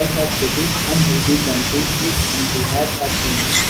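Throughout, an echo leak: a loudspeaker end's echo canceller likely sent its microphone pickup back, so the speech repeats 274 ms late, roughly 10 dB quieter.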